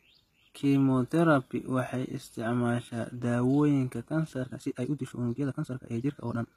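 From start to finish the speech carries plainly audible HE-AAC compression, likely from a low bitrate, around 20 kbps. The treble is rebuilt rather than recorded, so s sounds come out gritty and metallic, unlike the dull loss of a plain low-pass.

From 4.41 s to the end, a time-stretched section runs at 1.79 times the speed, likely squeezed by software to fit a length. The pace jumps and sounds rushed while the pitch holds steady, which separates it from a simple speed-up that would raise the pitch.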